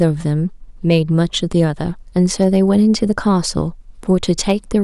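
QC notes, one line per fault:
0.01–0.04 s, 0.91–0.96 s, 2.41–3.03 s, 4.49–4.52 s: hard clipping, brief crackle on speech peaks; signal about 1–2 dB over the stage's limit, tops flattened, adding high harmonics.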